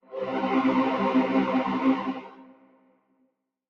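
A short recording of sounds with a speech-tuned noise suppressor left running the whole time, so held parts and tails pump and thin out, swinging by roughly 20 dB. From 2.14 to 3.34 s there's a case of sound cut by the noise suppressor: it mistakes the sound there for noise and pulls it down, by about 17 dB at the deepest, over about a second in total.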